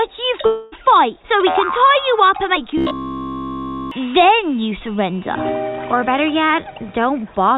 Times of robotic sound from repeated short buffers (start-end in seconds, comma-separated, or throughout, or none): 2.78-3.91